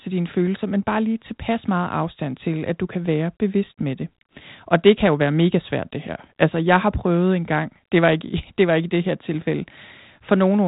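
No technical faults are audible anywhere in this recording.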